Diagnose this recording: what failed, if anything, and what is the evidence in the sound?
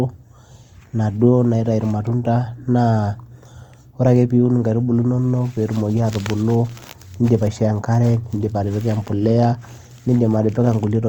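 Across the whole clip the speech has a grainy, rough texture, with a fine noisy fizz laid over the voiced sounds instead of clean harmonics, and it is plainly audible from start to finish. The top end stays open, reaching roughly 20.2 kHz, so nothing sounds muffled. The codec stage is the likely culprit: Opus compression in its music mode. It preserves each band's energy but fills starved bands with folded or noise content, which fits a rate around 24 kbps.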